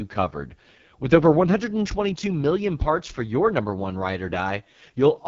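Throughout the speech, AMR wideband (HD Voice) coding at what sounds like its lowest 6.6 kbit/s rate leaves it rough and raspy, with nothing above 7.5 kHz.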